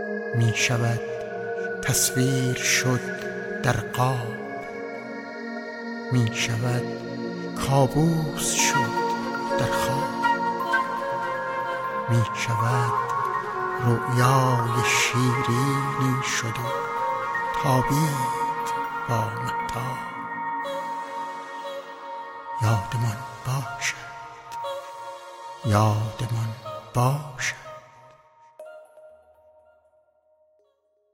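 There are no technical faults to describe in time order; the level simply fades out smoothly over the last few seconds, ending at 31.1 s.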